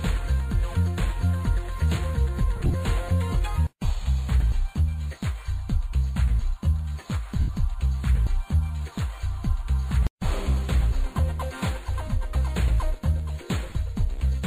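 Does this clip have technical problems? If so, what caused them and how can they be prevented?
Yes. Lost LE Audio frames occur at 2.56–2.75 s, 7.40–7.49 s and 13.67–13.75 s, with about 90, 90 and 50 ms missing. The first and last are short runs of a few tens of milliseconds, scattered rather than continuous. In each gap the LC3 decoder repeated the last spectrum with randomised signs, smearing tones into noise. Keeping the receiver close, with a clear line of sight and away from crowded 2.4 GHz traffic, prevents these dropouts.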